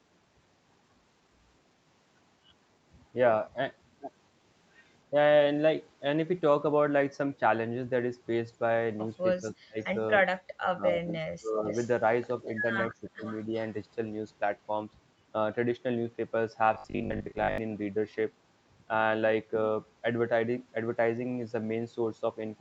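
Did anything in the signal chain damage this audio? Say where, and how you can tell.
Yes. Call processing, likely speech suppressed in double talk: the sound dips by about 35, 30 and 20 dB at 9.4–9.79, 10.74–11.64 and 12.92–13.24 s.

Call processing, likely an echo leak: a copy trailing by 344 ms, about 15–20 dB down, at 11.67–11.9, 12.46–12.54 and 12.92–13.62 s. A fixed delay means echo, not reverb.

Buffer stage, likely robotic sound from repeated short buffers: a rigid 50 Hz buzz from 16.74 to 17.58 s, which fits 20 ms repeats filling about half the time. Codec noise would not lock to one fixed pitch like this.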